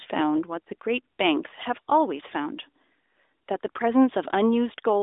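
No technical faults can be heard in this speech.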